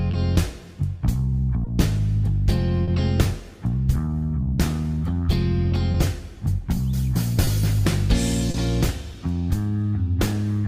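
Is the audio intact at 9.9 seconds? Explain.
No, 9.9 s falls inside a stretch where the sender's clock drift is being patched up. The sender runs a couple of percent slow throughout, so the receiver's jitter buffer keeps draining, and you can hear uneven little timing hiccups across the whole clip.

Right at 9.9 s you're also inside the repeated timing corrections, running from about 4.08 s to 10.34 s. To stay in step, the receiver keeps repeating short pieces, adding roughly 50 ms overall and playing that stretch at 99% speed.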